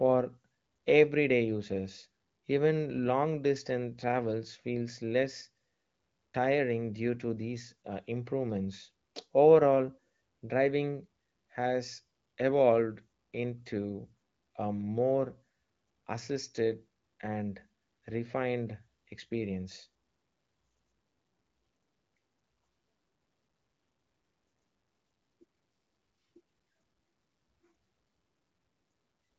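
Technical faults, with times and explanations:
No technical faults are audible in this speech. It comes through the AMR wideband (HD Voice) codec with only light coding texture and nothing above 7.6 kHz, which fits a rate of about 15.85 kbit/s.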